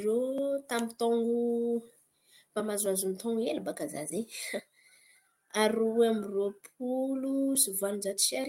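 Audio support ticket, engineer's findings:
Findings: no fault found on listening to the speech clip.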